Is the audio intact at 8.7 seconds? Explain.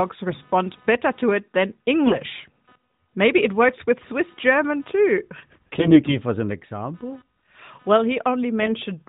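No. From 8.62 to 8.73 s there are AMR bit errors: the less protected bits of the AMR frames arrived flipped at a rate of a few percent, so the excitation pulses and the fine pitch, gain and spectral values are wrong. The span fits about five 20 ms frames. The speech keeps its rough pitch and level but turns hoarse, scratchy and gargly. Computer activity noise also runs under this moment, as in the whole clip: a buzz pulsing at roughly 300 Hz, about 35 dB below the speech. It comes from processor or graphics load moving the audio circuit's shared ground, so it follows the computer's activity rather than the sound.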